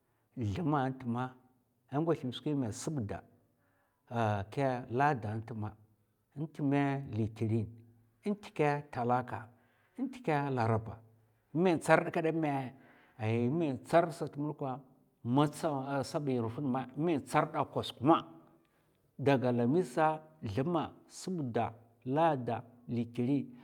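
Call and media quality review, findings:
Call and media quality review findings: no faults heard in this speech clip.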